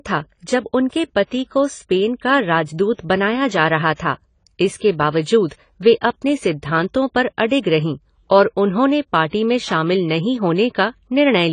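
Throughout, the speech has likely passed through AAC compression at a low bitrate, consistent with about 24 kbps, so the encoder dropped everything above 10 kHz and quantised the rest coarsely. The result sounds dull and smeared, with fizzy, warbling sibilants.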